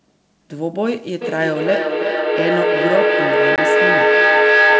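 From 1.21 s to the end, a feedback howl builds near 1.5 kHz, with the loop repeating roughly every 0.3 s and peaking about 6 dB above the speech as the microphone-loudspeaker loop keeps gaining. At 3.56 s, packet loss on the ADPCM call cuts a hard 20 ms hole, fitting one lost packet, after which the desynchronised decoder resumes slightly distorted.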